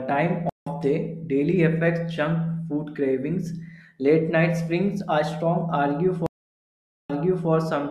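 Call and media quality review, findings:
Stream reconnect, 0.49–0.69 s: about 170 ms dropout, then playback picks up roughly a tenth of a second further on, at "day daily affects junk". Link dropped, player reconnected to the live position with a fresh decoder.

Stream reconnect, 6.26–7.49 s: 831 ms silence, then audio resumes 400 ms earlier, so a stretch repeats. Server resent a buffered burst on reconnect. New decoder start fades in the first frame.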